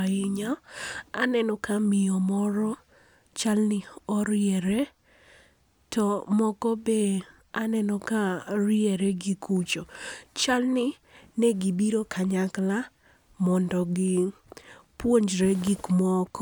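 No faults detected in the speech recording.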